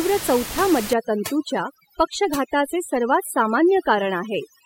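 From 0.93 s to the end, overdone noise removal cuts away bands close to the room noise, which sits only about 10 dB below the speech. Quiet speech detail goes with it, leaving near silence speckled with twinkling artefacts. A spectrogram shows dark gaps dotted with isolated bright specks.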